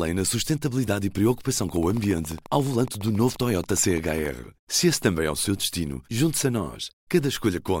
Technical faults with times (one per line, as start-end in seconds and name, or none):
1.62-4.26 train of clicks